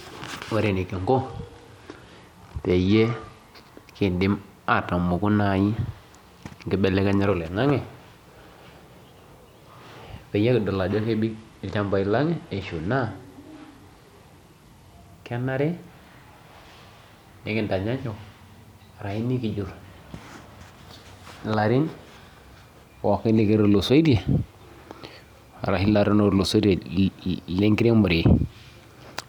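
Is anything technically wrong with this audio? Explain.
Yes. A Bluetooth SBC bit pool drop occurs from 0.93 to 3.48 s and again from 11.25 to 15.13 s. The link's bit budget shrinks, starving the top sub-bands, so speech turns dull and gritty, consistent with a fall to roughly 99 kbps. Spectrograms show treble abruptly vanishing above a cutoff.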